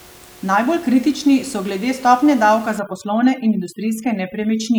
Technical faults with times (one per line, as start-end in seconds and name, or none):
2.79-4.79 overdone noise removal